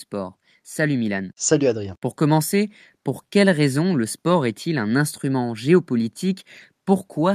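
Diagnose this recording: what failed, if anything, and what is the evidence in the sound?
Nothing stood out on listening to the speech in this recording, so there is no failure to diagnose.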